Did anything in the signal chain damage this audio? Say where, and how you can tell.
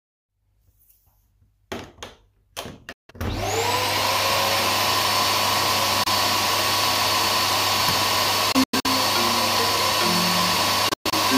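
Yes. The damage happened on the wireless playback link, most likely a Bluetooth dropout: audio packets missed their delivery deadline to the headphones and were discarded. The sound cuts to silence from 2.92 to 3.11 s (about 160 ms) and from 6.03 to 6.08 s. From 8.52 to 8.86 s and from 10.89 to 11.14 s the gaps break up into separate short holes, with the longest runs lasting about 93 ms and 116 ms. After each gap the sound picks up further along, as though it had kept playing.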